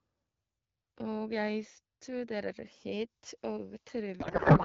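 From 4.19 s to the end of the clip at 4.65 s, a codec payload misread replaces the speech with garbled noise and warble that barely tracks it. The decoder is reading AMR wideband frames with their fields misplaced, which fits octet-aligned packing parsed as bandwidth-efficient.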